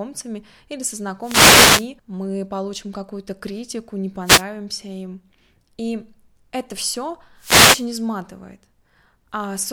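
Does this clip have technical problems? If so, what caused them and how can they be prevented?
Yes. Wireless microphone noise hits occur at 1.21 to 1.89 s, 4.24 to 4.44 s and 7.37 to 7.86 s. Each is a brief swish of static over the speech. Reflected radio signals cancelled, so the FM link faded and receiver noise rose. A diversity receiver with clear line of sight prevents this.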